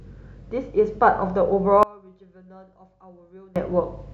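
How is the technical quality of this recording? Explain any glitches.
The recording has one clear fault. From 1.83 to 3.56 s, one channel was likely inverted: one stereo side had its polarity reversed, so summing to mono cancelled the speech common to both sides. The level drops by about 26 dB, leaving only a faint trace.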